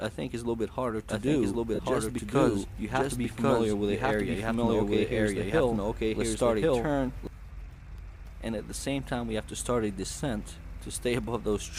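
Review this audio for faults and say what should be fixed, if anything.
A second capture path or a misaligned edit likely put the audio in twice, giving a doubled audio track from 1.09 to 7.27 s. A full-band copy at about the same level trails by about a second, with no room colour, and starts and stops abruptly. Routing one capture source only, and checking edits for stacked duplicates, prevents it.

Bluetooth LE Audio frames were lost at 1.75 to 1.79 s, and the LC3 decoder filled the 45 ms gap by repeating the last spectrum with randomised signs, which fits roughly six lost frames. Tonal content smears into noise there. A stronger link, less interference or closer devices prevents it.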